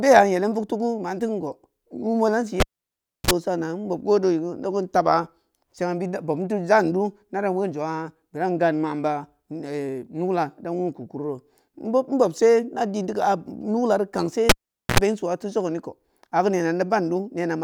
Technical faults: cable pulled and plugged in

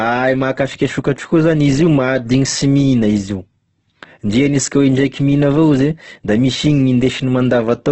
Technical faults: Opus compression

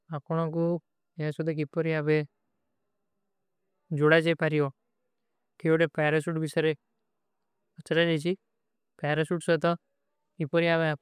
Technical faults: none

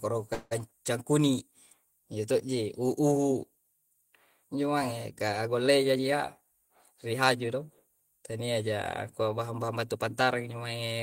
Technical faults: call audio freeze; jitter buffer speed-up

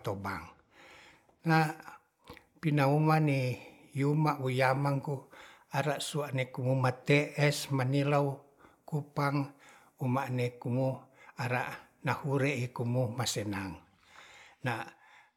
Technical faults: none

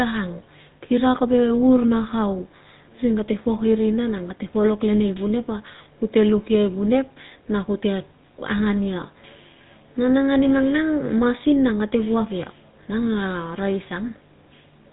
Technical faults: GSM full-rate codec

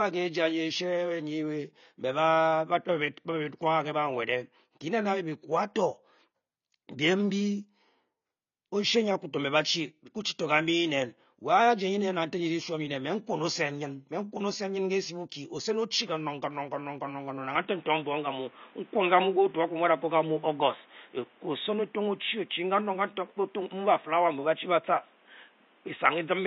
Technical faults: AAC compression; input switched to a poorer device

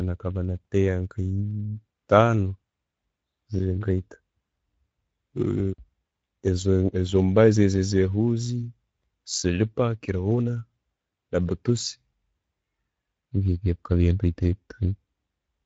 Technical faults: Speex codec

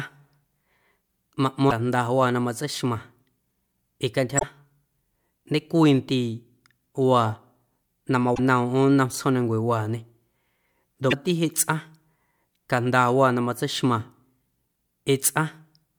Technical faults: damaged data in a compressed stream

